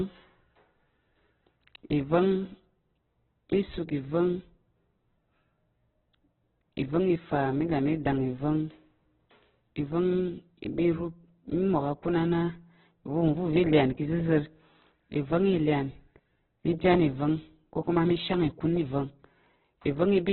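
Throughout, the speech stops above 4.1 kHz and sounds rough and grainy. Likely heavy Opus compression, at a bitrate near 8 kbps.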